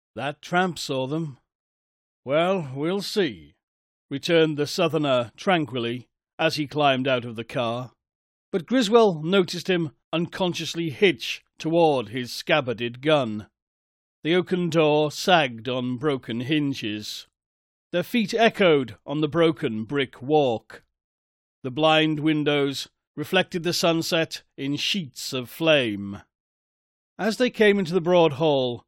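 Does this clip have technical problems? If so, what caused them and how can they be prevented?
No, nothing in this recording points to a technical problem, so there's no cause to track down and nothing that needs preventing.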